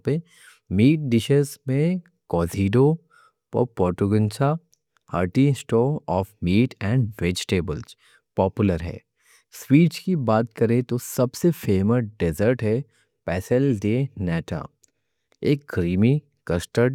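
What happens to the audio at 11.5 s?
Nothing goes wrong at 11.5 s: the speech carries on intact through that moment, with no dropout, click, distortion or other fault to be heard.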